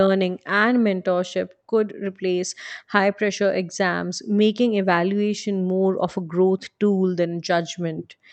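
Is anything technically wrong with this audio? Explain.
No, nothing technically wrong stood out on listening to this speech.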